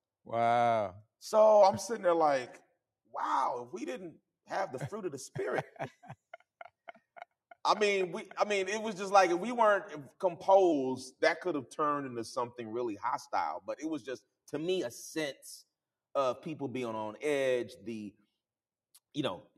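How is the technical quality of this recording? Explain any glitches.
Four glitches, all of the same kind, disturb the pitch and timing.

Drift correction steps occur at 1.62–2.99 s, 5.59–6.27 s, 10.72–12.58 s and 14.60–16.16 s. Each is likely a clock-matching resampler changing playback rate in one jump to rebalance its buffer. At 1.62 s and 10.72 s the sound slows by 6.35% and drops about 113 cents, just over a semitone flat. At 5.59 s and 14.60 s it speeds up by 6.35% and rises about 107 cents, roughly a semitone sharp. Each shift then snaps back to normal.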